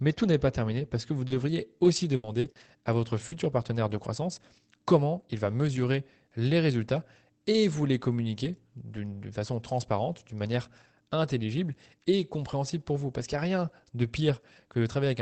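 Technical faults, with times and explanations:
1.27–3.36 s repeated packet loss (robotic sound): audio arrived with four gaps in quick succession, the longest about 80 ms. Each was filled by extending the preceding sound, roughly a fifth of a second rebuilt in all, so the speech turns choppy.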